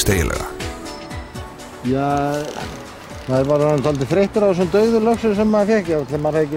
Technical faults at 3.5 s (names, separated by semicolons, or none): none